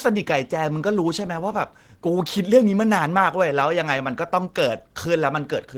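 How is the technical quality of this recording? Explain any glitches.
The speech carries plainly audible Opus voice compression damage for its whole length. It sounds slightly hoarse and mechanical, with a grainy, coarse texture, even though the top end still extends to about 20.2 kHz. The coder appears to run in hybrid mode: linear-prediction coding handles the band below 8 kHz, and a transform layer covers everything above. The roughness suggests a low bitrate of around 16 kbps, where the excitation signal is coded coarsely in short frames, consistent with 20 ms.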